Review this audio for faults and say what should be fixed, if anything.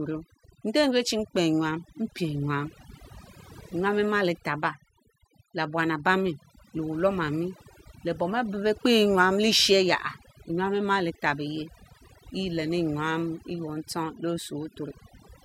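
Overdone noise removal runs through the whole speech clip: the reduction pulls individual frequency bands down whenever they sit near its noise estimate, so pauses fall to near silence with twinkling specks. Unlike low-bitrate codec swirl, the artefacts cluster in quiet passages and gaps rather than tracking loud content. Prevent it by applying gentler reduction, ideally from a cleaner capture, and checking pauses by ear.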